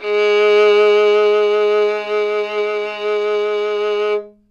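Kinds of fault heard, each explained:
No dropouts, clipping, glitches or other technical faults can be heard at any point in this recording of sounds.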